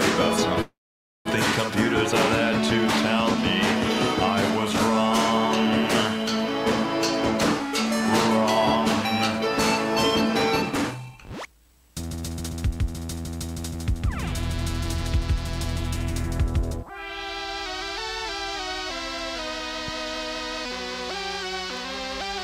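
At 0.61 s the audio stops moving forward and holds for about 0.64 s, until 1.28 s. This is a call audio freeze. The last sound is drawn out briefly before roughly 0.53 s of silence. Playback then resumes from the same point, with nothing lost, so the whole stream is pushed later by about 0.64 s. The likely cause is packets stalling in transit and the jitter buffer running dry, leaving the receiver to cover the gap.

From 10.92 s to 13.02 s there is a jitter buffer speed-up. Playback runs at about 129% of normal rate with the pitch unchanged, so the passage sounds rushed. The receiver has more audio queued than it wants. To catch up, it repeatedly cuts out short pitch-period-length slices. Over this stretch that removes roughly 0.7 s of material and brings the latency back down.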